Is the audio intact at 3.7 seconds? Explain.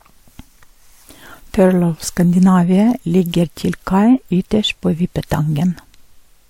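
No, at 3.7 s, as throughout, everything above 16.6 kHz is missing and two different lossy smearing textures are layered, which points to likely transcoding between lossy codecs rather than a single encode.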